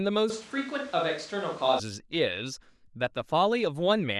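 From 0.30 s to 1.79 s, the voice abruptly turns roomy and hollow, with thinner bass. The level barely changes, but background noise rises to roughly 25 dB below the speech. This is likely a switch to a distant microphone. The close sound returns suddenly.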